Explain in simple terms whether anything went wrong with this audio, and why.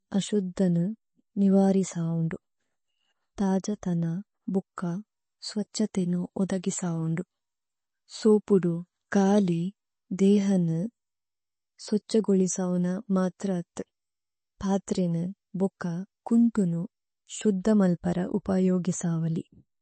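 The speech sounds dull and plainly watery from start to finish, as if heard through a thin wall, with a swirly, metallic edge on hissing sounds like s. There's no crisp top end at all: nothing is left above about 8.3 kHz. The likely cause is MP3 compression squeezed too hard. Short of space, the encoder throws away the treble entirely and drops quieter details that flicker in and out, which is what produces that warbling texture.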